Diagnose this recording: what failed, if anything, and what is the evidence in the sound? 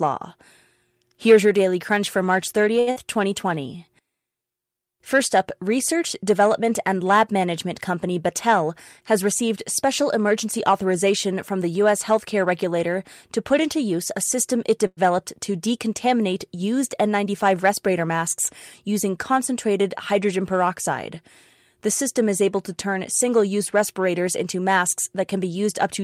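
At 2.79 to 2.90 s there is a short stall from a late packet. The speech holds its last sound for about 75 ms with a slight buzz or dip, then resumes exactly where it left off, with nothing missing. This is a network-stage fault: the jitter buffer ran dry while waiting for a packet, and the receiver extended the final sound to cover the wait. The playout delay grew by 75 ms.

Right after, from 2.91 to 2.99 s, there is a burst of packet loss. The receiver filled about 51 ms by continuing and fading the last sound. When the audio resumes, 80 ms of speech is gone. These packets never arrived in time to play. Skipping ahead reduced the accumulated delay by 29 ms, which partly undoes the stall just before it.

From 3.46 to 3.78 s a jitter buffer slow-down stretches the speech to 88% speed at unchanged pitch, and the sounds are drawn out. This happens in the receiver's buffer management. To rebuild its reserve, it repeated single pitch periods over and over, which added 45 ms of duration across the stretch.

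Between 8.62 and 10.73 s a jitter buffer speed-up runs the speech at 104% with the same pitch. The buffer was holding more audio than its target. It trimmed short pieces of one or a few pitch periods again and again until the excess was gone, about a tenth of a second in total.

At 14.87 to 15.00 s there is a call audio freeze. The last sound continues as a fading buzz or hiss for about 102 ms and drops to 30 ms of silence. The speech then picks up from the same point with nothing missing, so a gap has been inserted and the delay is up by 102 ms. The likely cause is packets held up in the network, which left the jitter buffer empty.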